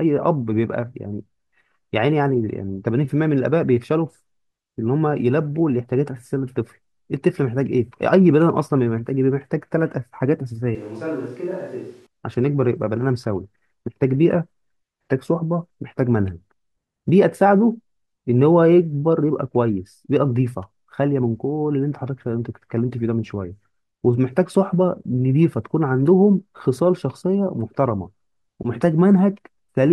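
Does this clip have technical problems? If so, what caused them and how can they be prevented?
Yes. From 10.75 to 12.07 s the speech turns roomy and hollow, thinner in the bass and about 10 dB quieter, with room noise rising to roughly 30 dB below the speech. The likely cause is a switch to a distant microphone. Unlike a plain gain dip, the tone and ambience also change, abruptly at both edges. Monitoring the close microphone's link and battery during recording would prevent this.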